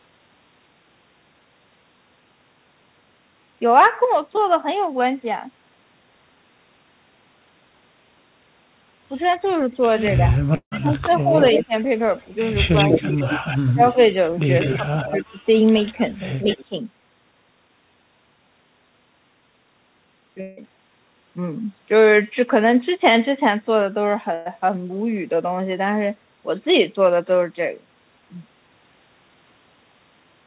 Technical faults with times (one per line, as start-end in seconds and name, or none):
10.18-11.73 speech suppressed in double talk
10.56-10.73 long network dropout
11.40-11.65 echo leak
12.19-15.24 echo leak
12.87-13.96 speech suppressed in double talk
14.74-15.47 speech suppressed in double talk
15.77-16.63 echo leak
16.44-16.74 speech suppressed in double talk
20.41-20.63 long network dropout
24.34-24.47 burst of packet loss